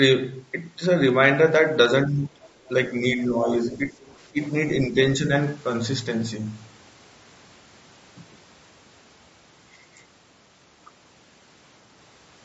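Throughout, the speech is rough and grainy. Noise fills the gaps between harmonics, and the top band sounds thin and synthetic. The likely cause is low-delay AAC compression, AAC-ELD at around 32 kbps. Its short frames resolve pitch poorly at this rate.

From 2.04 to 2.38 s the speech is suppressed in double talk. The voice dips sharply, by roughly 15 dB. The likely cause is an echo canceller that could not tell the talker from loudspeaker echo while both sides spoke, so it turned everything down.

At 2.43 to 2.48 s the other side's voice leaks through. It is a brief, faint scrap, roughly 30 dB below the speech. The likely cause is loudspeaker echo that the canceller did not fully remove. It happens again at 4.42 to 4.47 s.

More double-talk suppression follows. A shallow dip of about 5 dB runs from 2.88 to 3.48 s. A deeper one of about 10 dB runs from 3.66 to 3.97 s. The voice drops by about 15 dB from 4.32 to 4.55 s. 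A last slight dip comes at 4.87 to 4.98 s.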